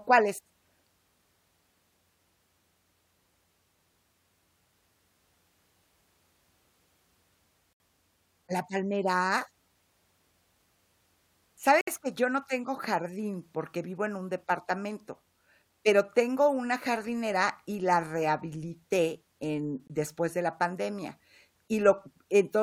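Speech clip with a gap between stream segments: hard-edged silences at 7.73–7.80 s, 11.81–11.88 s before "que yo no tengo", and 19.87–19.90 s between "y la rehabilité en" and "después de la pandemia", lasting about 69, 64 and 23 ms. They fall on boundaries of 4-second segments whose timestamps don't meet, so the player pads the gap with silence.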